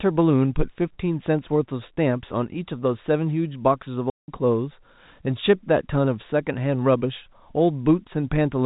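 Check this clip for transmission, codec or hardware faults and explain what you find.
One transmission fault is audible: a single dropout in speech carried over G.711 telephone coding, whose cut-off at 4 kHz is heard throughout.

From 4.1 to 4.28 s the speech drops to dead silence for 180 ms, with hard edges. This is packet loss filled with silence. A run of packets never arrived, and the receiver played silence in their place. The gap's length fits nine 20 ms packets.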